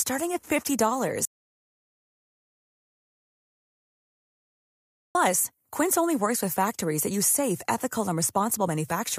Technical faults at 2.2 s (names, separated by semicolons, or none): audio dropout to silence